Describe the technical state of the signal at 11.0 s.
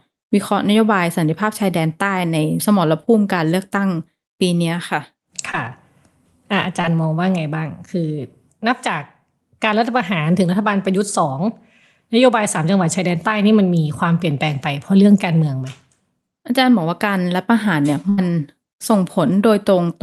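At 11.0 s the speech is intact, with no dropout, glitch or other fault, and only the ordinary band-limited character of the Opus call path.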